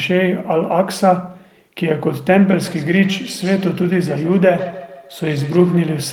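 Feedback echo between two devices runs from 2.51 s to 6.11 s. A second device in the room replays the call audio, this microphone captures it again, and its own echo canceller ignores it. Each syllable returns roughly every 150 ms, thinner and ringing, peaking about 15 dB below the speech.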